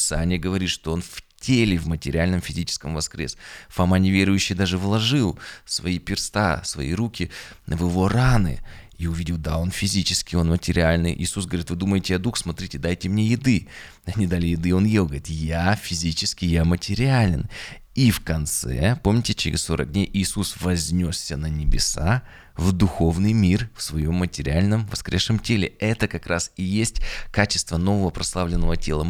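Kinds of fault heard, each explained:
Nothing stood out on listening to the speech here; no technical fault could be heard.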